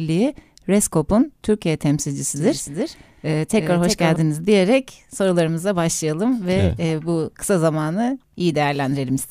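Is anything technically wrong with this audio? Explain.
Yes. From 2.36 to 4.16 s the speech has a doubled audio track. A second full-band copy trails about a third of a second behind, somewhat quieter. It starts and stops abruptly, with no room colour, ending just before "diyerek sorularımıza başlayalım ve". A slower second capture path is the likely cause.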